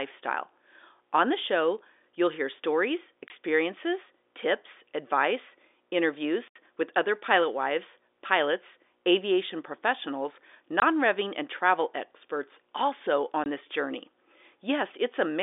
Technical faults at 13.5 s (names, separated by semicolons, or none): packet loss filled with silence